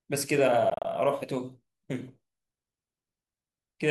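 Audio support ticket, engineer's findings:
Speech breaks up 0.70 to 0.85 s. Several short silent holes, about 87 ms lost across 145 ms, longest gap 29 ms. Sound resumes further on, no catch-up. Likely Bluetooth dropout: late packets discarded on the headphone link.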